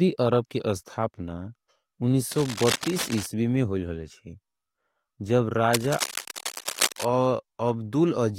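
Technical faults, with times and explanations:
2.32–3.26 s, cable scratch noise: a patch of dense, ragged crackle sits over the speech, roughly 10 dB under it, and clears just before "में होयल हले छेजब". It's likely a worn cable or connector being moved, with the contact resistance jumping around and spraying uneven noise bursts into the signal.
5.73–7.05 s, cable scratch noise: right after "में होयल हले छेजब" the same scratchy rustle comes back, louder this time at around 5 dB below the speech and lasting over a second. It's likely the same flaky contact being disturbed again.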